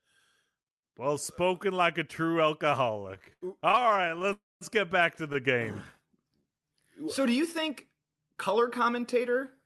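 From 2.97 to 4.33 s the speech shows repeated stalls (stutter): the jitter buffer keeps running dry, and the receiver fills each gap by extending the last sound. The gaps run up to 82 ms, together about 370 ms, roughly 28% of the span, so the speech drags and judders without losing anything.

Straight after, from 4.33 to 4.63 s, comes a call audio freeze. The sound stretches into a short fading buzz and then about 220 ms of silence before resuming where it stopped. This 281 ms hold-up was likely caused by packets delayed in transit.

From 6.02 to 6.81 s a jitter buffer slow-down rebuilds the reserve by repeating single pitch periods. About 130 ms is added, so the speech plays at 85% speed at unchanged pitch, with drawn-out sounds.

From 8.86 to 9.46 s a jitter buffer speed-up trims excess delay by cutting out short pitch-period pieces, around 40 ms in total. The speech runs at 106% speed at the same pitch and sounds slightly hurried.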